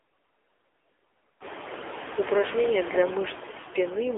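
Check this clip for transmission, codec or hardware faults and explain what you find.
Two faults run through the whole speech clip: noise suppressor artifacts and AMR narrowband mobile codec damage.

Noise suppressor artifacts are present from start to finish. The suppressor judges each frequency band frame by frame and pulls down what it reads as steady noise, by about 21 dB here. Gaps between words drop away, while leftover noise rises under the speech. Unlike codec warble, this pumping follows the speech gaps. It is clearest after the room noise rises by about 12 dB at around 1.5 s, settling about 10 dB below the speech.

The AMR narrowband mobile codec affects the entire clip. The voice is rebuilt from a vocal-tract model driven by sparse pulses, so it sounds buzzy and synthetic, and background noise swirls. Nothing passes above 3.7 kHz, with the line band roughly 300 Hz to 3.5 kHz. 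The plainly audible damage fits a low mode near 8 kbps. A simple low-pass filter would dull the sound without adding this buzz.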